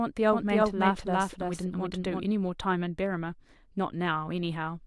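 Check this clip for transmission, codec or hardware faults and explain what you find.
One fault is present: a doubled audio track between 0.33 and 2.25 s. A second, full-band copy of the speech runs about 300 ms behind the original at roughly the same level, most likely because the signal was captured again through a slower path and mixed back in. Unlike room echo or reverb, the copy has no decay tail, no room colouring and no further repeats, and it switches on and off abruptly at those two times.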